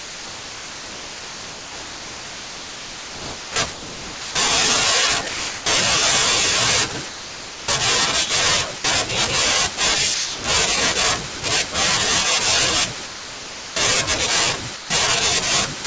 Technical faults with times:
0.00-5.66 sound chopped by the voice detector
7.08-8.84 sound chopped by the voice detector
10.14-11.42 sound chopped by the voice detector
13.06-14.90 sound chopped by the voice detector

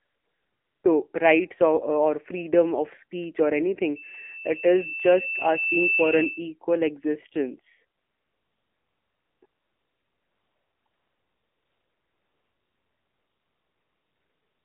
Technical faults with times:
0.00-14.64 AMR narrowband mobile codec
0.00-0.84 AMR comfort noise
3.95-6.53 loudspeaker feedback squeal
7.98-14.64 AMR comfort noise

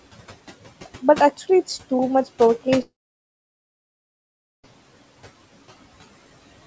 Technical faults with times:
0.00-6.67 noise suppressor artifacts
2.82-4.65 long network dropout

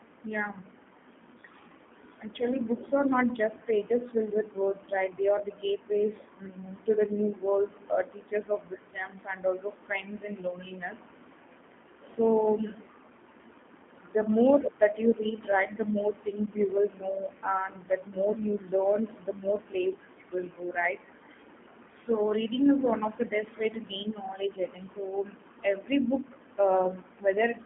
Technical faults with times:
0.00-27.66 G.729 codec

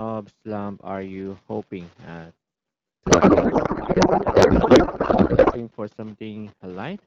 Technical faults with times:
3.06-5.65 codec payload misread

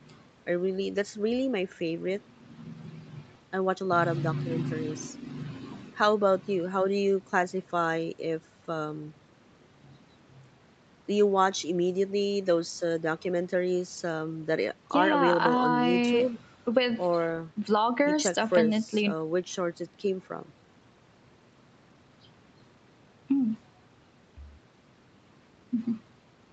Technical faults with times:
none

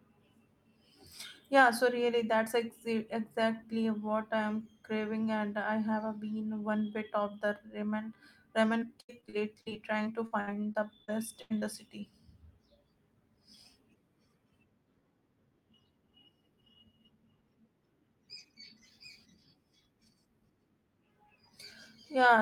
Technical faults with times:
8.79-11.64 repeated packet loss (robotic sound)

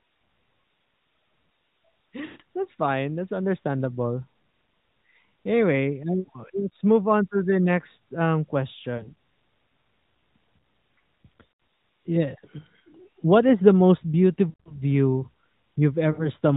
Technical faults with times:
2.26-2.41 lost AMR speech frames
6.20-6.29 lost AMR speech frames
8.98-9.10 lost AMR speech frames
11.52-11.60 lost AMR speech frames
14.50-14.82 lost AMR speech frames
16.12-16.30 lost AMR speech frames

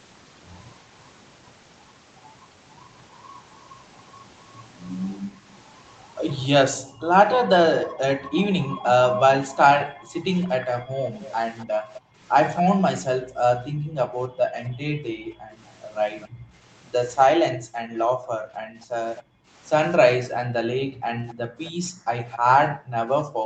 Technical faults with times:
6.76-7.91 echo leak
6.93-23.46 background gated by the echo canceller
11.22-12.62 echo leak
14.64-14.69 echo leak
16.21-16.27 echo leak
19.16-19.23 echo leak
21.29-22.37 echo leak

